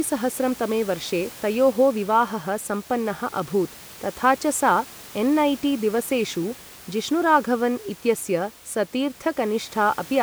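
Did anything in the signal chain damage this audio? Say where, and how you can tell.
No, nothing in the signal chain damaged this audio; the only background is the room's own noise, about 21 dB below the speech.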